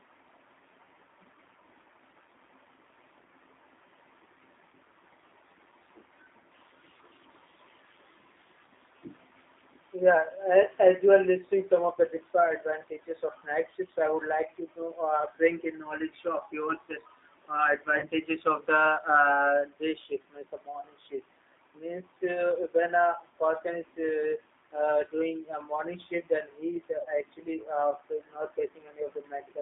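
Throughout, the speech sounds rough, thin and plainly synthetic within about 250 Hz to 3.7 kHz, which fits the G.729 codec at 8 kbit/s rebuilding speech from a coarse model.

At 17.99 s and again at 27.02 s, the speech briefly smears into a fading buzzy tone or coloured noise, from VoIP packet loss concealed by the speech codec, which guesses across about 30 ms of missing audio, pointing to a single lost packet each time.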